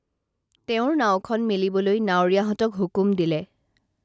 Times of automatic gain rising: 0.51-3.53

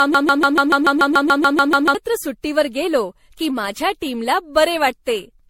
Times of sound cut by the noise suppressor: none

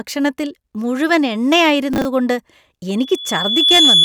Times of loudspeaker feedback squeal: 2.98-4.05

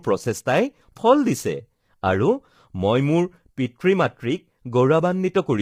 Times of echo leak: none

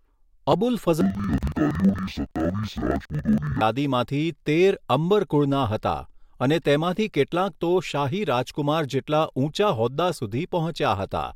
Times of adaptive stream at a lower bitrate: none

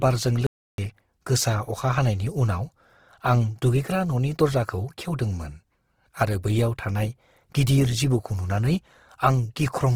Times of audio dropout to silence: 0.47-0.78

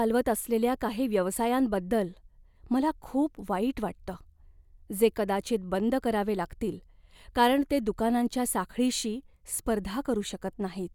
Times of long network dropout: none

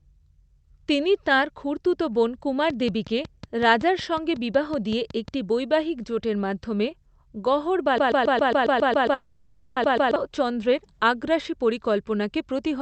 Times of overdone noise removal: none

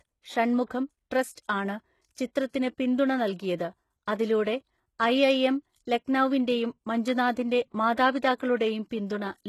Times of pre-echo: 8.37-8.40

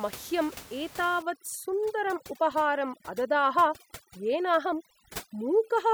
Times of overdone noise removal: 1.22-5.94

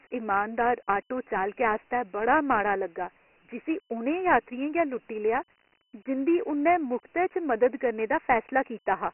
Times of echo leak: none

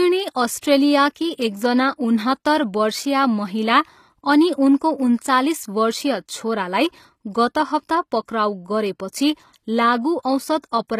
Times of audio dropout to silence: none

